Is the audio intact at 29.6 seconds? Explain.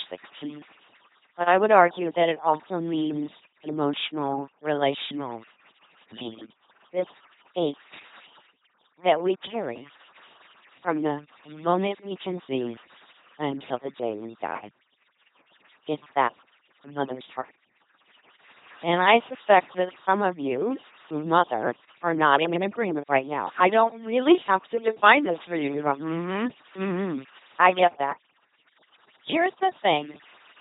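No, at 29.6 s it's still carrying the overdone noise removal heard throughout: bands near the noise floor get pulled right down, leaving near-silent gaps with twinkly specks. It's also going through an LPC-10 vocoder, which fits a 2.4 kbit/s rate. Each moment is forced to pure buzz or pure hiss, so the speech sounds robotic, with nothing above 3.8 kHz.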